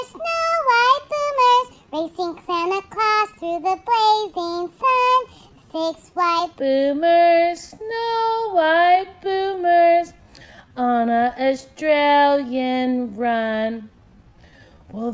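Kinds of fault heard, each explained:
Wrong sample rate: From 6.59 s to the end, the audio is played back slower than it was captured, with no rate conversion, so speed and pitch drop together. Everything runs at 0.667 times its proper speed and sits about 7 semitones lower, a perfect fifth down, making the sound heavy and dragging. That two-thirds ratio fits 24 kHz material being played at 16 kHz.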